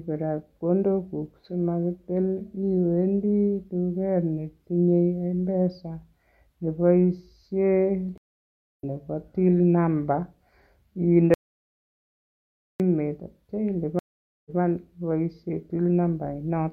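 At 8.18 s a stream reconnect cuts the speech to 0.61 s of silence. It resumes at "nebo till number" about 0.7 s further on, because the player rejoined a live stream with a fresh decoder and skipped ahead. From 11.34 to 12.80 s an audio dropout to silence replaces 1.46 s with silence, with no room tone and no jump in the timeline. The likely cause is that the input was lost while writing continued. A second stream reconnect at 13.99 s gives 0.46 s of silence and then restarts about 0.14 s early, so a fragment repeats. That skip or repeat is what separates a reconnect from a dropout.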